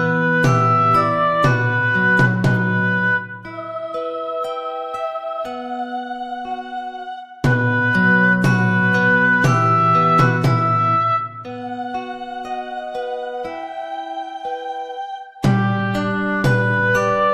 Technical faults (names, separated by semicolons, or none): none